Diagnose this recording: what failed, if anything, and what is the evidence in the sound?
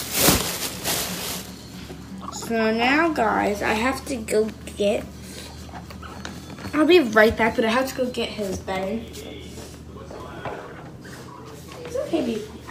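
Drift correction step, likely at the driver or buffer stage: 0.33–2.09 s plays 6.3% slow, 113 cents flat; 6.13–7.09 and 10.74–12.26 s play 6.3% fast, 106 cents sharp. Speed and pitch move together, then snap back, unlike gradual wow.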